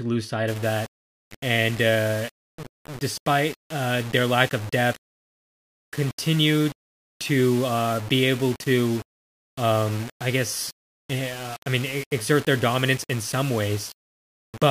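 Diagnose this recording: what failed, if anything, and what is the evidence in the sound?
From 0.48 s to the end, grainy grit tracks the speech about 20 dB down: likely low bit depth without dither, fitting undithered rounding to 6 bits.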